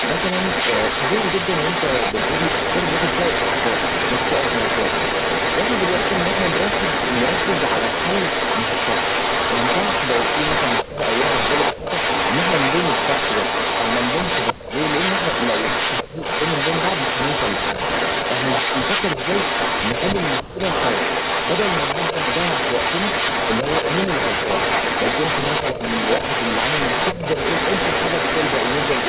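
From the start to the end of the speech, an echo leak runs underneath. A copy of the voice returns about 310 ms late. It sits roughly 5 dB above the direct speech. The likely cause is a loudspeaker echo that the far side's canceller failed to remove. Like the direct voice, it carries no content above 4 kHz from the narrowband call codec.

Speech is then suppressed in double talk at 10.86–10.97, 11.74–11.83, 14.53–14.65, 16.04–16.21, 20.43–20.59, 25.74–25.79 and 27.13–27.22 s. Each dip lasts about 50 to 150 ms. The dips range from slight to near-silent. This is likely the canceller ducking the voice while the echo overlapped it.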